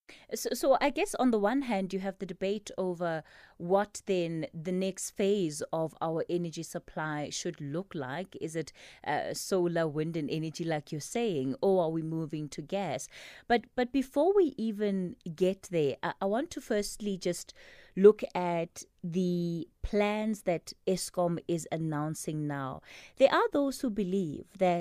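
No technical faults can be heard anywhere in this speech recording. Nothing in the signal calls for a timestamp or a closer look.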